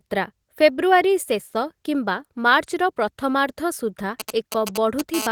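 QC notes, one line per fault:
4.20–5.01 s, GSM signalling bursts: a nearby 2G phone transmits short groups of radio bursts while signalling, and the audio circuit rectifies them into the line. The result is a galloping dit-dit-dit of brief 217 Hz buzzes, only a few dB below the speech.
5.14–5.27 s, GSM phone buzz: the phone switches to continuous call transmission, pulsing 217 times a second, and the rectified pulses come through as a hard, raspy 217 Hz buzz rich in harmonics, about 6 dB below the speech and unrelated to it.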